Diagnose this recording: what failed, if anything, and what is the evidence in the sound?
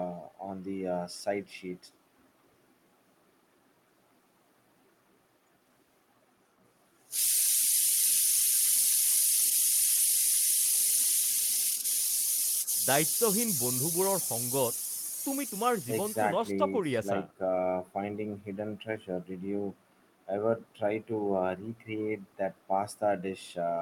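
Nothing failed; the speech shows no audible faults.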